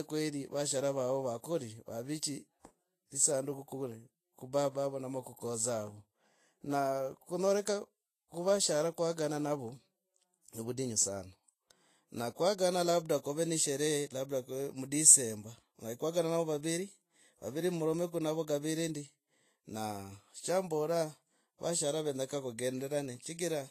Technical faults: Vorbis compression

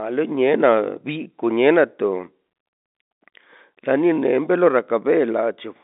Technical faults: none

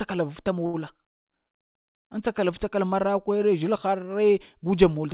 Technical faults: short stall from a late packet; call audio freeze

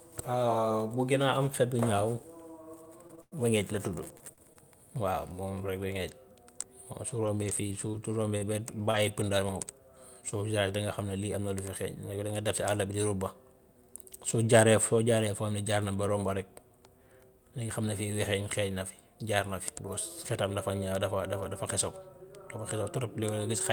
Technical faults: repeated packet loss (robotic sound); scattered short gaps

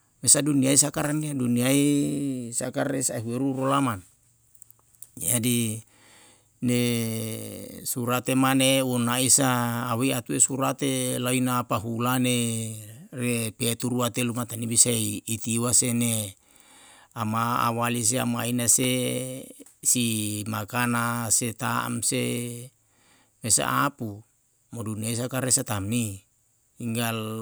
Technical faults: electrical switching spike

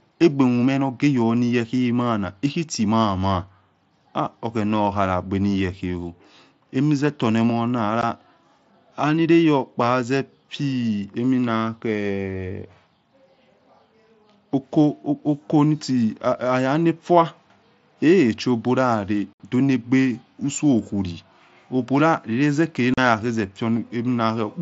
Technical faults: unconcealed Bluetooth headset packet loss

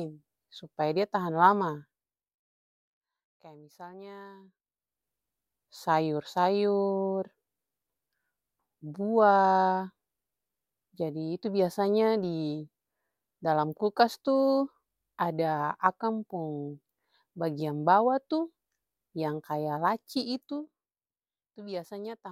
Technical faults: zipper noise

